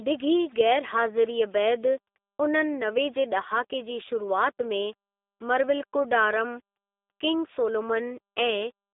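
From start to finish the speech carries the sound of the G.729 codec, here the lighter G.729A variant running at 8 kbit/s. The coder models the vocal tract and pitch and then fills each short frame with a handful of pulses, so the voice comes out intelligible but rough and a bit synthetic, and that damage is plainly audible. The band is narrowed to roughly 300 Hz to 3.6 kHz, with nothing surviving above 3.7 kHz.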